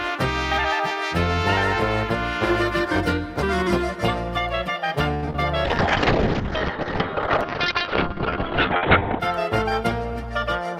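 Repeated packet loss (robotic sound) runs from 5.14 to 5.39 s. Five gaps arrive in quick succession, the longest 82 ms. About half this stretch is patched by extending the preceding sound and some of it is simply missing, so the audio turns choppy.

A call bitrate drop follows from 5.65 to 9.26 s. The encoder was pushed to a far lower rate, with sound that points to roughly 48 kbps falling to 7 kbps. Coarser coding makes the audio rough and watery, and the top end closes in from 20 kHz to 4 kHz, staying muffled for about 3.5 s.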